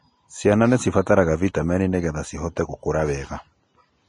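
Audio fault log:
Throughout, Vorbis compression: the speech sounds hissy and grainy, with a roughened edge on sustained sounds and softened attacks on consonants, and nothing at all is heard above 10.6 kHz. This is likely low-bitrate Vorbis encoding, consistent with a rate near 30 kbps, where the encoder drops the top band and quantises the remaining treble so coarsely that fine detail turns into noise-like texture.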